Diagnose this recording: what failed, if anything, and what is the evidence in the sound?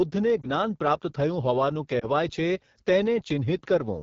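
Codec stage: the AMR wideband (HD Voice) codec is audibly rough and raspy throughout this speech, which fits a low mode around 8.85 kbit/s.

Network stage: lost AMR speech frames cause brief dips or warbles at 0.41 and 1.99 s, each fitting one lost frame that the decoder concealed with fading gain.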